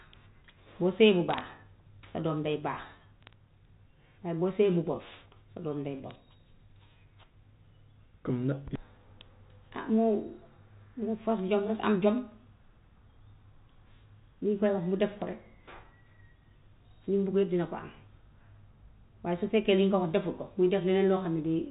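Bit errors on a digital phone line hit this speech at 1.29–1.41 s, 3.22–3.33 s, 6.11 s and 15.17–15.22 s: flipped bits, at an error rate of a few tenths of a percent, corrupt single samples into sharp ticks and crackle over the telephone-band G.711 audio, which cuts off at 4 kHz.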